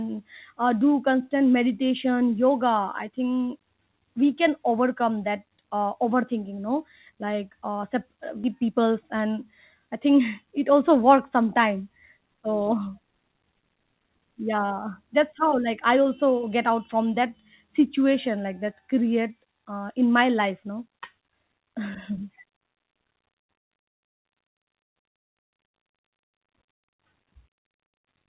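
At 8.44 s the speech makes a skip ahead: about a second and a half of audio is dropped, and the two sides are joined with no gap. Jitter buffer speed-up follows from 8.62 to 9.33 s at 110% and from 9.79 to 10.45 s at 109%, just before "it also works sometime". Short pitch-period pieces are cut to drain excess buffered delay, roughly 70 ms each time, so the speech sounds hurried at unchanged pitch. All of it is heard through G.711 mu-law band-limiting, with nothing above 4 kHz.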